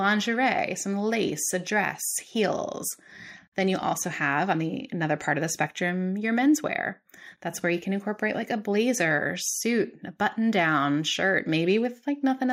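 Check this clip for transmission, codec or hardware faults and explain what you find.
Nothing stood out on listening to this speech recording.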